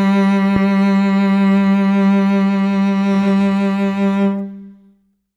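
A single sharp loud pop cuts across the music from 0.56 to 0.58 s, standing out well above it, roughly 10 dB louder, while the music continues underneath. It is likely a sudden voltage spike, such as from a plug, switch or static discharge, entering the signal chain.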